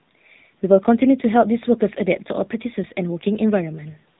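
From start to end, AMR narrowband mobile codec damage: nothing passes above 3.8 kHz, and a buzzy, synthetic coarseness, unlike a plain low-pass filter, fits a low bitrate near 7.4 kbps.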